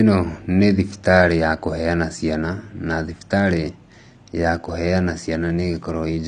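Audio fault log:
Throughout: AAC compression. Nothing is present above 10 kHz, so the speech sounds dull and muffled, and the codec damage is plainly audible as a smeared, fizzy, warbling texture on sibilants and held sounds. The likely cause is AAC-LC coding at a low bitrate, which fits something around 32 kbps. At that rate the encoder trims the top band and quantises the remaining frequency lines coarsely, so detail turns into gritty, unstable noise.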